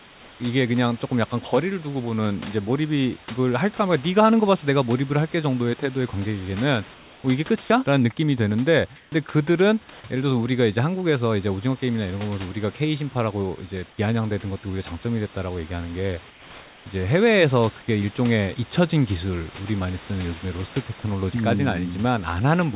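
In six pauses in the speech, at 0.0–0.4 s, 6.94–7.24 s, 8.96–9.12 s, 9.9–10.04 s, 13.9–13.98 s and 16.3–16.86 s, the room background is replaced by comfort noise: a steady, featureless hiss, likely from discontinuous transmission where the receiver synthesises noise during silence. It is usually about 2 dB quieter than the real background and about 10 dB quieter at 13.9 s. At 8.96 s and 9.9 s it is about 1 and 3 dB louder.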